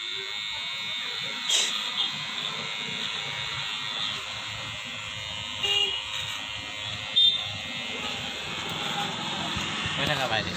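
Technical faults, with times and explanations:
Nothing stood out on listening to this recording.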